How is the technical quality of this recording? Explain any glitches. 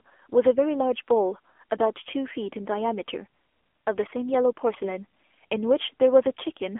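The recording is speech heard through a mobile-phone codec, so the technical quality is poor throughout.

AMR narrowband mobile codec, present for the whole clip: the signal is confined to roughly 300 Hz to 3.4 kHz and rebuilt from a vocal-tract model driven by sparse pulses. The plainly audible buzzy, synthetic texture points to a low bitrate, around 7.4 kbps.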